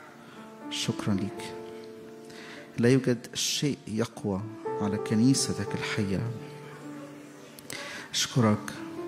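At 1.17 to 1.23 s and again at 2.45 to 2.48 s, compressed frames are skipped. Whole blocks of coded audio, each 42.7 ms long, never reach the output. The first gap drops about two frames (roughly 100 ms of material), and the second drops one (about 40 ms). Each time, the audio jumps ahead by the missing length. On a spectrogram, the time patterns jump, and the waveform envelope steps abruptly.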